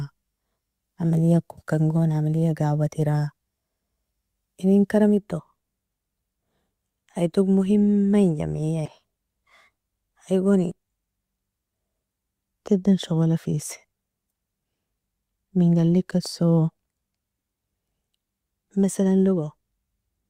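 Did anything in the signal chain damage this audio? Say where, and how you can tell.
Yes. A corrupt frame was decoded at 8.86 to 8.91 s in this speech clip, a codec-stage fault whose error peaks around -20 dBFS. Damaged bits in a couple of compressed frames were decoded anyway, putting energy at the wrong frequencies for that span.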